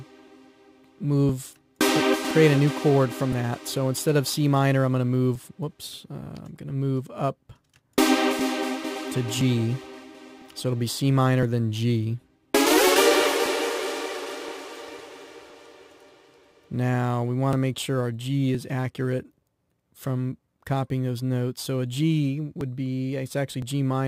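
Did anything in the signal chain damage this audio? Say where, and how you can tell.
Yes. Periodic USB or driver dropouts at the driver or buffer stage: regular ticks every 1.01 s from 0.27 s to 23.62 s, each skipping around 10 ms of audio. On the waveform these show as abrupt splices; on a spectrogram, thin broadband vertical lines evenly spaced.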